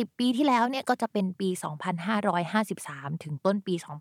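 No technical faults are audible anywhere in the speech recording.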